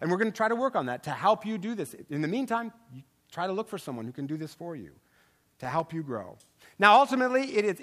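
From 5.31 to 5.80 s, after "do this for you", processor overload crackle tears through the speech. About fifteen tiny buffers miss their deadline and drop to silence.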